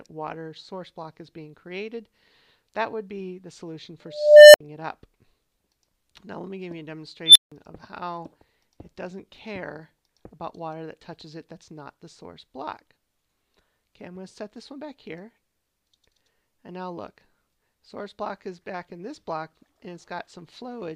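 At 3.51 s the sound jumps in a small forward skip, with around 10 ms missing and the two sides butted together. The same skip recurs at 19.1 s. Both are likely a dropped buffer (overrun), where samples were overwritten before the program read them.

From 4.05 s to 4.60 s an unstable filter produces a tone near 700 Hz that swells over about 0.49 s into clipping, then cuts to roughly 64 ms of silence as the runaway recursion overflows and resets. At 7.26 to 7.52 s a second one rises faster, in about 96 ms, as a squeal around 4 kHz, followed by about 0.16 s of silence.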